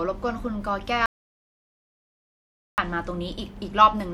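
At 1.06 s the speech stops dead and the track falls to complete silence until 2.78 s, an audio dropout to silence lasting 1.72 s, with no room tone underneath. The input was likely lost, through a disconnected device or failed link, while recording continued writing silence. Whatever was said in that span is gone. On the waveform it is a flat line; on a spectrogram, a fully blank band between abrupt vertical edges.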